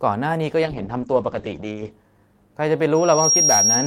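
From 0.64 s to 1.99 s the speech goes through a call bitrate drop. The connection's bandwidth estimate fell, and the encoder was pushed from about 64 kbps down to roughly 9 kbps, staying at its lowest for about 1.28 s. At that rate the codec quantises coarsely and discards everything above about 8 kHz, where the top had reached 20 kHz, so the voice turns muffled and watery. Unlike packet loss, there are no gaps or repeated fragments. The voice then clears as the rate recovers.

At 2.95 s a loudspeaker feedback squeal begins and runs to the end of the clip. The microphone is picking up the loudspeaker it drives, and at 5.6 kHz the loop gain exceeds one, so that single tone feeds on itself. It swells over roughly 0.4 s until it sits a few dB above the speech. What separates it from steady tonal interference such as a whistle or electrical hum is that growth. It starts faint and rises instead of appearing at a fixed level.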